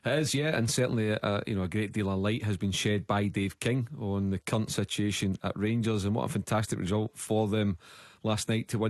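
Nothing here calls for attention: the audio comes through the call link with its high end rolling off around 12 kHz, as that kind of connection does, and nothing else stands out.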